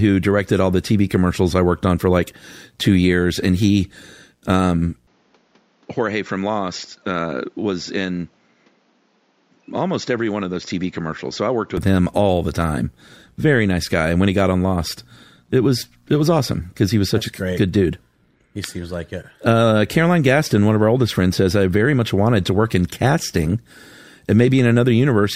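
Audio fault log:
5.07–11.77 s, input switched to a poorer device: recording likely jumped to a weaker microphone after "years and he um", cutting everything above 7.3 kHz, dropping the voice about 5 dB and adding a quiet new noise floor, until clarity returns before "him all the time".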